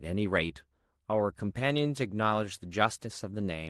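No technical faults can be heard in the speech, which comes through an Opus call path whose coding texture and top end near 12 kHz are what that codec normally leaves.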